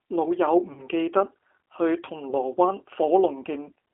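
Throughout, the speech sounds rough and slightly synthetic, confined to roughly 300 Hz to 3.4 kHz. This is plainly audible G.729 codec damage, consistent with 8 kbit/s G.729A rebuilding each frame from a filter, pitch and a few pulses.

From 0.73 to 0.84 s, and again from 2.30 to 2.34 s, the sound smears into a fading buzzy tone or coloured noise. This is VoIP packet loss concealed by the speech codec: the decoder extrapolated over about 40 ms and then 20 ms of missing audio, which fits two packets and then one.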